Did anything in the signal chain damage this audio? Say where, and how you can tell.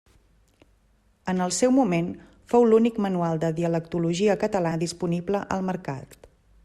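Yes, at the codec. Compressed frames skipped at 4.71–4.73 s: the speech jumps ahead roughly 100 ms, about five 20 ms frames.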